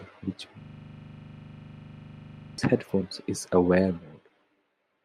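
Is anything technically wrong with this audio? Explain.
Yes. From 0.61 to 2.58 s, before "headphones is", a system hang loop repeats one 40 ms slice 49 times while the stalled driver's ring buffer cycles, giving a steady 25 Hz buzz.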